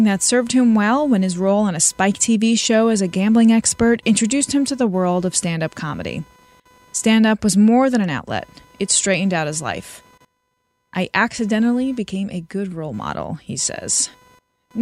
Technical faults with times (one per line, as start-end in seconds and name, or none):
0.00-14.81 computer activity noise